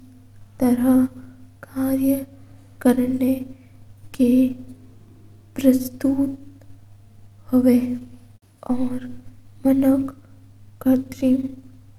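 No technical faults can be heard anywhere in the speech, and the signal holds steady in level and continuity throughout.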